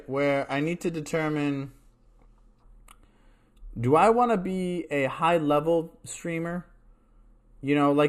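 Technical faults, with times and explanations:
0.0 to 2.0 s, adaptive stream starting at a low bitrate: The speech opens thin and smeared. The treble is missing or sounds synthetic, and coding artefacts are strong. This fits a low-bitrate HE-AAC start of around 24 kbit/s. The player begins cheaply to start fast. At 2.0 s the quality jumps with no gap, which fits a switch to AAC-LC at around 96 kbit/s once the connection was measured. Nothing is heard above 14.9 kHz.
2.63 to 8.09 s, channel delay (comb filtering): From 2.63 s to the end, the speech turns hollow and phasey. One channel arrives late by a tiny amount, roughly 0.1 ms, which fits a delay of about four samples. When the two channels are summed to mono, shared sound cancels at evenly spaced frequencies. The first notch falls near 5 kHz.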